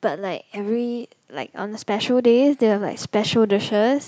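From 0.17 s to 4.03 s the whole sound swells steadily, speech and background rising together by about 8 dB. This is automatic gain rising: the gain control judged the input too quiet and kept raising its gain gradually across nearly the entire clip.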